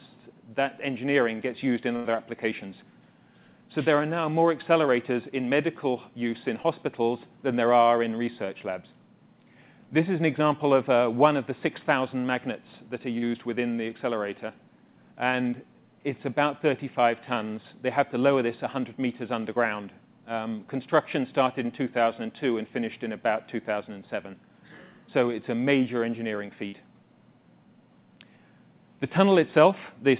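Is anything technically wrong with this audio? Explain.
Yes, there are dropouts from packet loss, heard through a call path whose audio stops at 4 kHz, consistent with a G.711 A-law codec at 64 kbps.

Burst of packet loss, at 1.96 to 2.07 s and 26.68 to 26.75 s: late or lost packets left gaps of 85 ms and 46 ms. The receiver stretched the last sound, fading it as a held buzz or hiss. The audio then jumps ahead, with about 80 ms and 40 ms gone.

Short concealed packet loss, at 6.63 to 6.66 s and 13.18 to 13.24 s: brief holes of 15 ms and 40 ms were patched by extending the preceding sound, then blended back. Each is heard as a quick smear or wobble.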